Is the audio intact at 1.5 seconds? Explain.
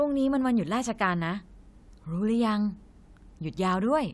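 Yes, the speech at 1.5 seconds plays through intact, with no dropout, click, distortion or other technical fault at that point.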